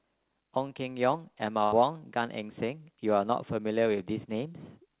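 Speech clip, band-limited to about 4 kHz as narrowband call coding would leave it, with a burst of packet loss at 1.64–1.74 s: about 80 ms of audio never arrived, so the receiver stretched the last sound into a fading fill before speech resumed, with about 80 ms skipped.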